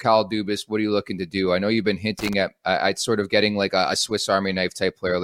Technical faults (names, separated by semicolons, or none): loose connector crackle